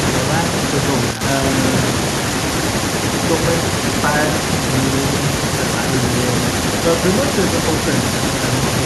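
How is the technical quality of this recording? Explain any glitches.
The technical quality of this recording is good, and there are no glitches to explain.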